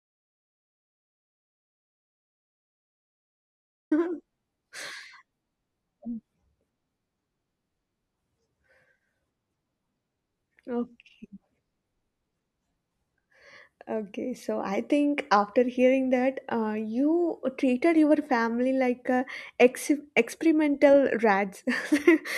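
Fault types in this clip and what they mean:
Audio dropout to silence: silence with no room tone from the very start until speech cuts in at 3.91 s, likely from a lost input.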